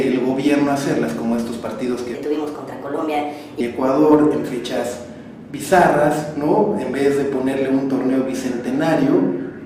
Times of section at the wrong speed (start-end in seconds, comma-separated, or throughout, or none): 2.15-3.60